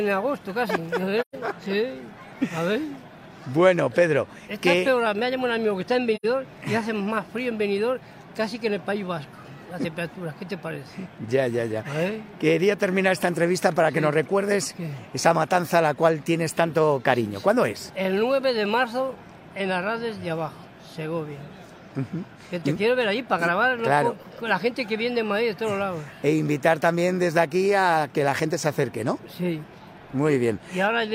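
At 1.21 s the sound drops into a gap lasting until 1.35 s, and at 6.15 s a shorter one runs to 6.26 s. Both are AAC frame loss with muting: the decoder received no data for those frames and output silence in their place. The overlapping transform windows taper the sound down and back up around each gap, giving soft-edged holes of about 128 ms and 85 ms, consistent with three and two lost frames.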